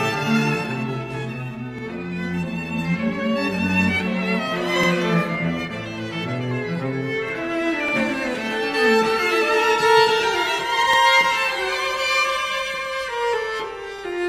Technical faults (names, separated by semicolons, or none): overlapping chunks